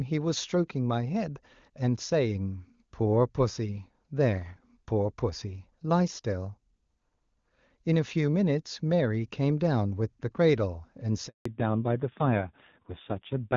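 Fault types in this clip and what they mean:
handover gap: From 11.27 s to 11.45 s the speech drops out for about 180 ms. The call switched networks and no speech frames arrived during the transfer, so the sound fades within a few tens of milliseconds and stays silent until the new link carries audio.
fallback to narrowband: From 11.45 s to the end, all content above 4 kHz is gone. The call left the clean-sounding wideband HD Voice codec for an older narrowband one, and the speech becomes duller and rougher, which fits AMR-NB at around 5.9 kbit/s.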